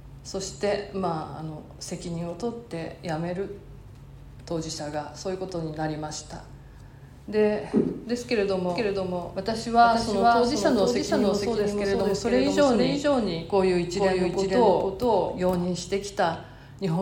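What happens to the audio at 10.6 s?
A doubled audio track plays from 8.70 to 15.66 s: an equally loud copy lags about half a second, likely from a second capture path, so spectrograms show every event repeated.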